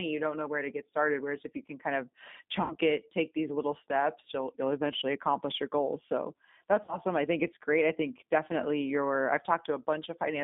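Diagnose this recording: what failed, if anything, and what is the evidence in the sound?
Rough, slightly synthetic speech with nothing above about 3.7 kHz throughout points to the codec stage: G.729 at 8 kbit/s rebuilding the voice from a filter and sparse pulses.

At 2.62–2.76 s after "you can kind of", 5.00–5.02 s before "accomplish your goals", and 6.84–6.99 s before "I think it's great", speech smears into a fading buzzy tone or coloured noise. This is network packet loss concealed by the speech codec, extrapolating across gaps of roughly 80, 20 and 40 ms.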